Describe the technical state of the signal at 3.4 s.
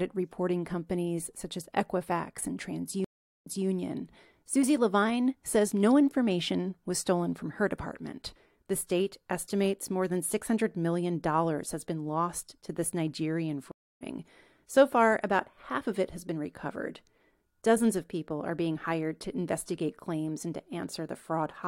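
At 3.4 s the signal is in the dead gap of a stream reconnect spanning 3.04 to 3.66 s. The connection dropped, playback went silent for about 0.41 s, and the player then reconnected and started a new decoder partway through the stream. When sound returns it picks up 0.21 s earlier than where it cut off, so a short stretch of the speech is heard twice.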